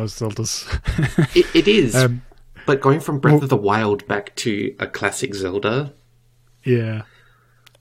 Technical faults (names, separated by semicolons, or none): none